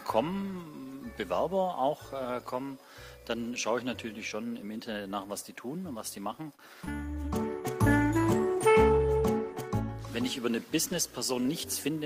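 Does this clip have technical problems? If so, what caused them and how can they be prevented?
Yes. At 6.55 to 6.61 s there is a short stall from a late packet. The jitter buffer ran empty, and the last sound was held for 32 ms. Unlike a loss, nothing is skipped. A larger or adaptive jitter buffer prevents this.

At 6.85 to 6.93 s there is short concealed packet loss. About 20 ms of audio never arrived and was filled by extending the preceding sound, so a little content is actually gone, unlike the stall. Forward error correction or redundant packets prevent this.

From 6.95 to 10.44 s there is a call bitrate drop from 32 to 16 kbps, lowest for about 2.2 s. The audio is rougher and duller throughout, unlike the brief glitches. More bandwidth headroom or traffic prioritisation prevents this.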